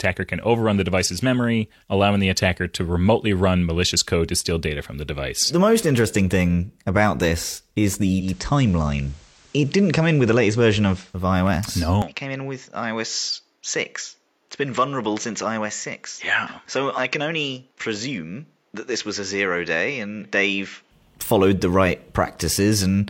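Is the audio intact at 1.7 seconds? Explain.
Yes, the speech at 1.7 seconds plays through intact, with no dropout, click, distortion or other fault at that point.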